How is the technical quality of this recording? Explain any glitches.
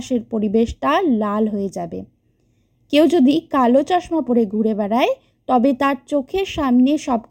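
The recording has one fault, present for its whole length: channel delay (comb filtering). One channel of the speech arrives roughly a third of a millisecond behind the other, and the two are summed to mono. Content shared by both channels cancels where the offset equals half a period, which puts the first notch around 1.5 kHz, with further notches at evenly spaced frequencies above it. The result is a hollow, phasey tone that stays fixed throughout.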